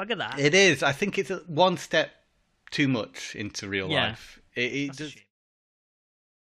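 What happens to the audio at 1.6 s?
Nothing goes wrong at 1.6 s; the speech there plays through cleanly, with no dropout, click or distortion.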